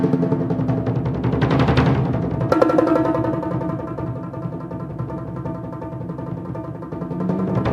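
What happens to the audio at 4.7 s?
Nothing goes wrong at 4.7 s; the audio plays through that moment intact, with no dropout, click, glitch or other fault.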